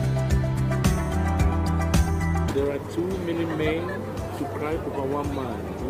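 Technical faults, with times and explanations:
2.49–2.51 s, skip ahead: about a second of audio vanishes and the two sides join directly, with no silence or fill, unlike a dropout, which leaves a gap.
2.77–3.61 s, jitter buffer speed-up: tiny pitch-period slices, a few tens of milliseconds in all, are trimmed to drain excess delay, so the sound runs 3% fast at unchanged pitch, unlike a resampling error, which would shift pitch.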